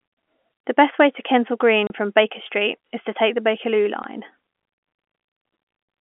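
Speech over a G.711 telephone channel, band-limited to the phone line, with two dropouts from packet loss filled with silence: a 30 ms hole from 1.87 to 1.90 s and a 10 ms hole at 4.03 s. The receiver played silence in place of the missing audio, so the speech cuts out abruptly with hard edges. Both gap lengths are consistent with 10 ms packets.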